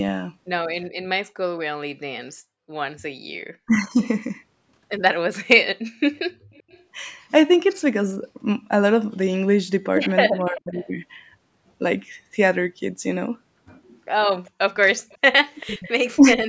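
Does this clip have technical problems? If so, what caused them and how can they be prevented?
Yes. Speech suppressed in double talk at 3.66–3.8 s, 10.36–10.74 s and 15.62–16.44 s: the voice dips by about 15, 35 and 25 dB. The likely cause is an echo canceller turning down its own talker along with the loudspeaker echo when they overlap, which is unlike a network dropout because it tracks the far side's speech. A full-duplex canceller with better double-talk detection prevents it.

Echo leak at 6.15–6.19 s, 6.53–6.82 s, 10.51–10.88 s, 14.45–14.51 s and 15.09–15.91 s is a faint copy 388 ms late, about 20 to 35 dB below the voice. That fixed delay marks it as returned echo, not room reverb, and it is likely residual loudspeaker pickup. Using a headset at the far end avoids it.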